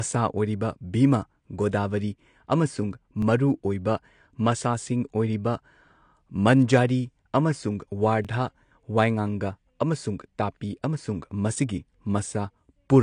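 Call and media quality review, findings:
AAC compression throughout the speech: dull, smeared top with fizzy sibilants, nothing above 9.8 kHz. Likely an AAC-LC encoder starved of bits, consistent with about 32 kbps. The warbling texture points to coarse quantisation, not a simple low-pass filter.

Pre-echo at 1.71 s: brief hiss ahead of a sharp onset, spread about 17 ms, attack softened. Transform codec smearing block quantisation noise backwards. It precedes the onset rather than repeating it, so it is not a chunk join.

Overlapping chunks at 3.22 s and 8.25 s, the second just after "ꯃꯟꯖꯥꯔꯤ ꯑꯃꯁꯨꯡ": click-stutter, a 23 ms piece replayed. Chunking at 5 s spacing with overlap not trimmed at the joins. Exactly repeated audio at a regular interval, unlike codec hiss.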